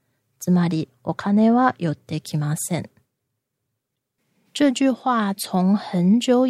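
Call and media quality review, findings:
Damaged data in the compressed stream at 3.93–3.96 s. Decoder component: corrupted bytes made it misread the frame and lose sync, then search for the next frame header. Heard as a short glitch cutting into the speech for about 26 ms.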